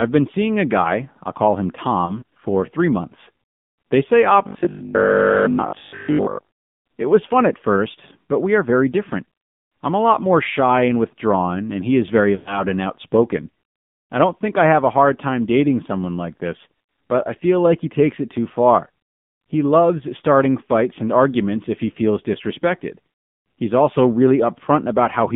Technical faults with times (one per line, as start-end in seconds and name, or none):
0.00-25.35 AMR narrowband mobile codec
2.06-2.23 lost AMR speech frames
4.47-6.51 robotic sound from repeated short buffers
10.44-10.47 lost AMR speech frames
12.36-12.60 lost AMR speech frames